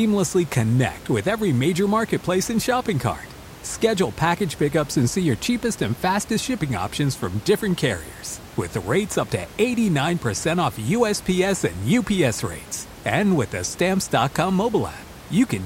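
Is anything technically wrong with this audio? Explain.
No, nothing technically wrong can be heard here.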